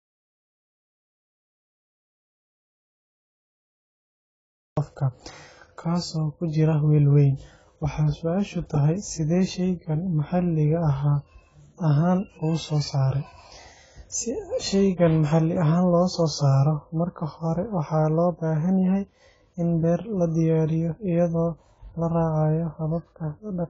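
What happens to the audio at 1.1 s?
At 1.1 s the clip is inside an audio dropout to silence that is already under way when it begins and lasts until 4.77 s. It was likely caused by the input being lost while silence kept being written. The waveform is a dead flat line, and the spectrogram is blank, with no room tone. The clip also carries heavy AAC compression, likely AAC-LC at a bitrate of about 16 kbps, which cuts off everything above 7.7 kHz. On a spectrogram this shows as a hard ceiling at that frequency, with smeared, dull texture below it.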